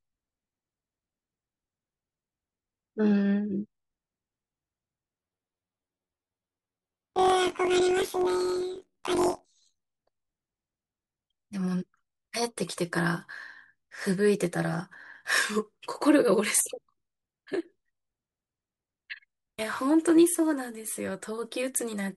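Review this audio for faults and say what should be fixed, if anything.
From 5.18 to 9.84 s the speech turns into a robotic buzz: planar audio read as interleaved. Each 21.77 ms block of left-then-right samples plays twice at double speed, giving a buzz near 45.9 Hz. A spectrogram shows vertical striations about 22 ms apart, and the waveform repeats in half-block segments. Fix it by declaring the buffer layout explicitly and converting planar blocks to interleaved before playback.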